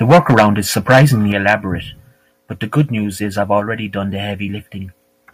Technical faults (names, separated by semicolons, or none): microphone overload; microphone volume stepped down